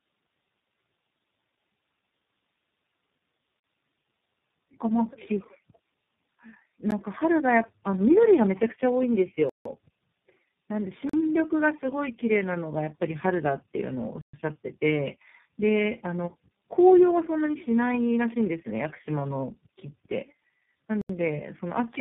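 Tandem speech coding runs throughout: the sound has been squeezed through successive low-rate speech codecs, each re-coding the previous one's damage, so it is rough, muffled and warbly, with nothing above 3.8 kHz. That fits three lossy coders in a row, such as GSM, AMR and iLBC.

Blocks of digital silence cut in at 3.60 s for 40 ms, 6.91 s for about 14 ms, 9.49 s for 160 ms, 11.09 s for 40 ms, 14.21 s for 120 ms and 21.01 s for 80 ms. In each, the output was zeroed with no fade, so the sound cuts out and back abruptly. The shortest is a tick, the longest clear holes.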